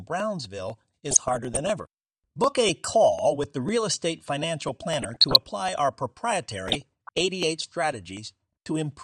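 From the start the speech has a dull, gurgling, granular edge, which is most likely MP2 compression at a low bitrate. The degree of damage fits something like 80 kbps. The coder divides the signal into 32 sub-bands and, short of bits, shuts off the upper ones and quantises the rest coarsely, so the top end flickers in and out. Unlike burbling, this damage is steady rather than arriving in bursts.

From 0.20 s to 8.92 s there are periodic USB or driver dropouts, a tick every 0.25 s, roughly forty in all. Each time a blocked bus or driver causes about a millisecond of audio to be skipped outright, with no silence inserted, so the waveform jumps and clicks. The strict clock-like spacing, and the fact that the ticks sound only while there is signal, separate them from random crackle or codec artefacts.

DAB burbling appears from 1.06 s to 1.68 s, from 4.99 s to 5.47 s and from 6.66 s to 7.21 s. 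In each burst, bit errors have got past the error correction into the MP2 stream and corrupted samples over a run of frames. Wrong samples put short blips of noise into single sub-bands over the speech. What distinguishes this from the steady compression dullness is its bursty, erratic character. What distinguishes it from the dropouts is that it comes in irregular patches rather than at a fixed interval.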